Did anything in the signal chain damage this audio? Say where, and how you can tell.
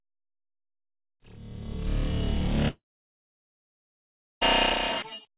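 Yes. From 2.68 to 4.43 s the sound fades into a brief buzz, then about 1.6 s of silence: a network-stage fault, likely a long network dropout.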